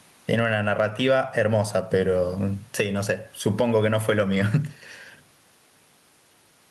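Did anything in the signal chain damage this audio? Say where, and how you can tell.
Yes. Throughout the clip there is gain pumping: the background, sitting about 45 dB below the speech, swells in the pauses and ducks by around 10 dB under each loud syllable. The likely cause is input gain set far too high, with a fast limiter or compressor in the call processing pulling it back. Noise suppression would mute the gaps instead of lifting them.

At 4.35 to 4.41 s a lost packet was rebuilt from error correction, a network loss repaired by the codec. About 40 ms, which fits two 20 ms packets, turn briefly rougher and noisier. There is no silent gap or smeared repeat, so this is not plain concealment.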